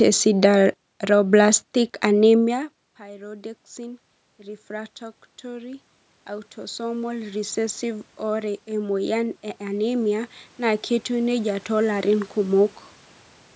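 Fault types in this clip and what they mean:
Automatic gain rising: after the sound drops by about 21 dB when the talker moves away around 2.5 s, the automatic gain control compensates by slowly raising its gain, about 4 dB from 2.44 to 4.07 s and then about 14 dB from 4.67 to 12.65 s. Voice and room noise swell together. On a waveform the envelope widens steadily, and on a spectrogram the noise floor between syllables brightens along with the speech.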